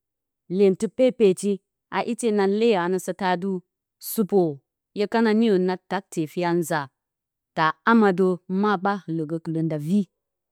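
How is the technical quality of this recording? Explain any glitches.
No glitches turn up anywhere in the recording. There is nothing to explain, as the speech comes through without any audible technical fault.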